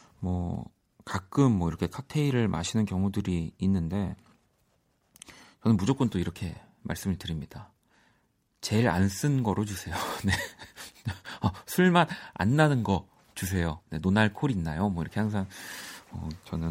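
No technical faults can be heard in the recording.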